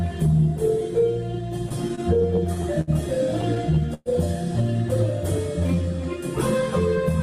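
From 1.69 to 2.90 s there are repeated stalls (stutter). Packets arrived late, so the jitter buffer ran dry eight times. Each time, the receiver extended the last sound until new data came. That fills 149 ms, about 12% of the span. The longest hold is 63 ms. Nothing is lost, but the audio drags and catches. A second stutter runs from 3.41 to 4.09 s. It has four stalls filling 157 ms, about 23% of that span. The longest hold there is 117 ms.

At 5.60 to 5.83 s comes a jitter buffer slow-down. The buffer needed more reserve, so the receiver repeated short stretches of the signal in a row. This adds 46 ms. The passage plays at 84% speed. The pitch stays the same. Sounds there are drawn out and seem to lag.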